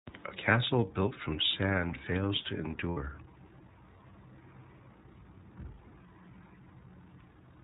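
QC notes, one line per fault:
Throughout: iLBC codec. Nothing above 4 kHz survives. Speech sounds clear but rough and synthetic, which fits the 13.33 kbps mode with 30 ms frames.
2.91–2.98 s and 5.87–5.91 s: lost iLBC frames. The decoder repeats the last pitch cycle with noise, giving brief buzzy held vowels. The gaps match about 60 ms and 30 ms. Speech recovers at once.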